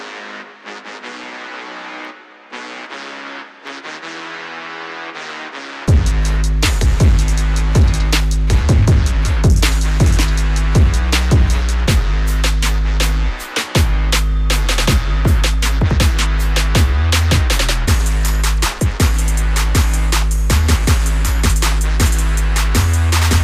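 Clock drift buffer slips, likely from mismatched device clocks, drop or repeat a few samples, giving a click every 0.81 s from 0.42 to 23.19 s.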